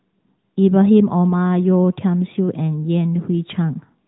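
From start to finish the speech carries AMR narrowband mobile codec damage: nothing passes above 3.8 kHz, and the vocal-tract model leaves plainly audible buzzy, synthetic edges, which fits a higher-rate mode around 10.2 kbps. A spectrogram shows an empty band above a flat ceiling.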